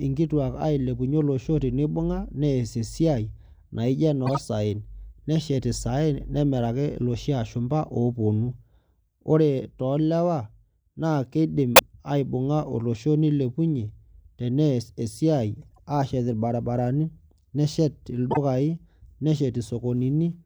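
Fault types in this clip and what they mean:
Corrupt frame decoded: damaged compressed frames were played instead of being concealed, so for a few frames at a time energy lands at the wrong frequencies. This produces brief chirps and noise bursts at 4.25, 11.76, 15.62 and 18.31 s, each lasting about 55 to 180 ms. The burst at 11.76 s peaks near -5 dBFS, and the one at 15.62 s is faint. A dropout mutes or smears the sound, but here energy at the wrong frequencies replaces it.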